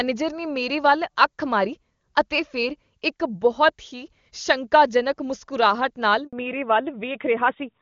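Right after "ਮੁਸਕਰਾਹਟ ਨਾਲ", at 6.27 s, there is a handover gap. The call was switched from one network to another. No speech frames got through during the switch. The speech fades out in a few tens of milliseconds. Then there is silence for 60 ms, until 6.33 s. Whatever was said in that moment is gone.

From 6.33 s to the end there is a fallback to narrowband. Before this, the clear, wideband speech fits HD Voice at a high rate, around 23.85 kbit/s. Afterwards the call drops to the older narrowband codec, likely at 12.2 kbit/s. Nothing above 4 kHz remains. The sibilants lose their edge. The speech sounds duller and rougher for the last stretch.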